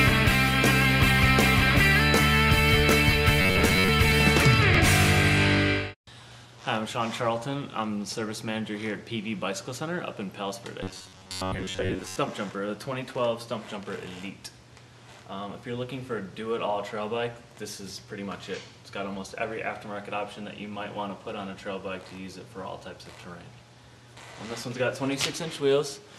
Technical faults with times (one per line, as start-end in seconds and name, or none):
3.42-3.88 robotic sound from repeated short buffers
10.83-12.16 robotic sound from repeated short buffers